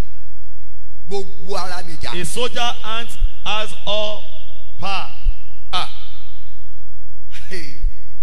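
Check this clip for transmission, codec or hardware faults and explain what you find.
Three short damaged spots point to corrupt frame concealment: at 3.22–3.25 s, 5.26–5.29 s and 7.84–7.91 s. The AAC decoder detected damaged frames and muted or smeared them. The last one is roughly twice as long, which fits several adjacent frames being lost.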